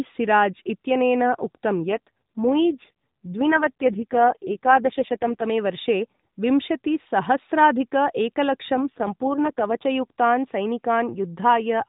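From 1.80 to 5.44 s the speech goes rougher and more synthetic, then recovers, and the same thing happens again from 8.74 to 9.86 s. Those are AMR rate drops. The network pushed the codec down to a lower mode, which sounds like a fall from about 12.2 kbps to 4.75 kbps, leaving fewer bits to model the voice. The narrowband 4 kHz ceiling stays put and there's no gap, just that buzzier texture until the rate comes back up.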